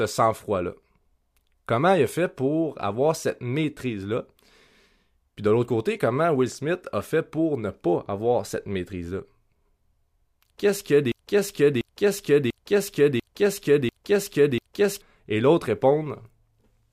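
At 11.12 s the speech locks into a broken-record loop: a 0.69 s fragment plays six times back to back until 15.02 s, identical each pass, and whatever should have been said in that stretch never arrives. The likely cause is a stalled player or stream resending its last buffered piece. On a waveform the same envelope shape tiles end to end; a spectrogram shows an identical block of harmonics and formant bands stamped repeatedly, recurring every 0.69 s.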